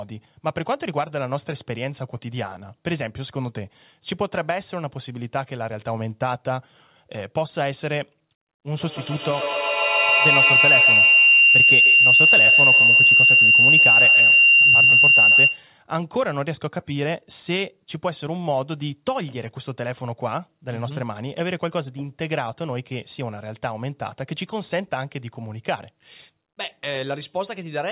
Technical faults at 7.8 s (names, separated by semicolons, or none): none